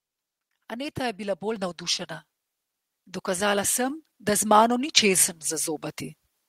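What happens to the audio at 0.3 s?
Nothing goes wrong at 0.3 s: the speech plays through cleanly at that moment, with no dropout, click, distortion or other fault.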